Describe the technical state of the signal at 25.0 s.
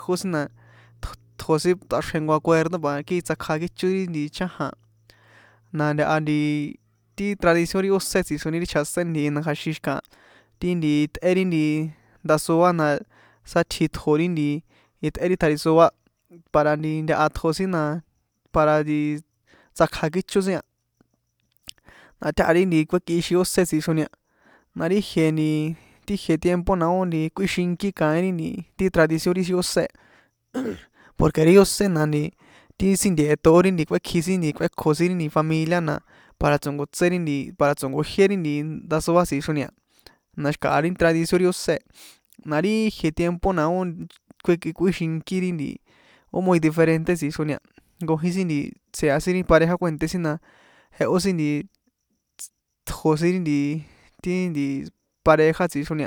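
The audio at 25.0 s is intact, with no dropout, distortion, glitch or other fault in the signal there.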